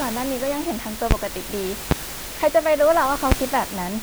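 A speech clip with three loud pops, at 1.11–1.14 s, 1.91–1.94 s and 3.32–3.35 s. Each is one sharp thump, roughly 20 dB above the speech, which continues underneath. A voltage spike from static or a switch is the likely cause.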